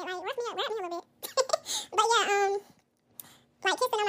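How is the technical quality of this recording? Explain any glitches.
Poor: the whole recording plays back wrong because the audio was read two samples at a time (double speed). From start to finish, the reader treated each pair of samples as a single frame, as if the stream had two channels or samples twice as wide. The speech therefore runs at 2x speed and sits a full octave (12 semitones) higher, giving a hurried, chipmunk-like quality.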